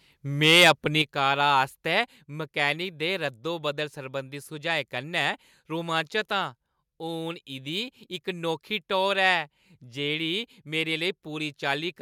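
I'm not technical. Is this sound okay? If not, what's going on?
No, not quite. From 0.43 to 0.71 seconds the loudest bit crackles harshly, with a small share of it flattened at the top. That's microphone overload, most likely from the mic's input level being set too high, so the peaks got chopped off.

Right after, the microphone volume stepped down: at 1.02 seconds everything, voice and background, suddenly gets noticeably quieter, then dips a little more at 2.04 seconds. It sounds like the call software likely turned the mic down after that distorted moment.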